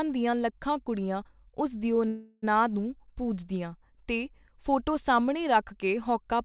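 At 2.08 s the speech stops advancing and the last sound is stretched into a fading buzz until 2.44 s, a call audio freeze lasting about 0.34 s. The likely cause is packets stalling in transit so the jitter buffer ran dry and the receiver filled the gap itself. Nothing is lost: the speech resumes exactly where it halted, at "ਨੂੰ ਪੂਜਦੀਆਂ ਤੇ ਫੋਟੋ", now running about 0.34 s later, through a narrowband path with nothing above 4 kHz.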